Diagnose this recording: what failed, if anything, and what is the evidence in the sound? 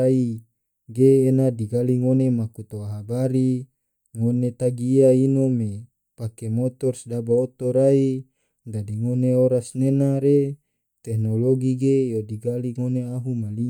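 Nothing failed in this recording, and the sound gives no evidence of a fault at any stage.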